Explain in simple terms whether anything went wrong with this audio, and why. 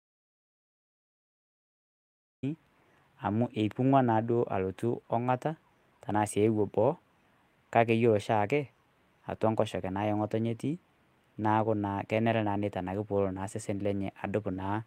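Two things went wrong. The speech is already silent when the clip begins and stays that way until 2.43 s. This is an audio dropout to silence, likely from the input being lost while recording continued. It is total silence, not quiet room noise, so nothing from that stretch survives.

At 13.75 s there is a brief rough, noisy moment. This is a lost packet rebuilt from error correction. One short 20 ms piece went missing, and the system filled it from a lower-quality backup copy, so there is no gap, just a momentary blemish.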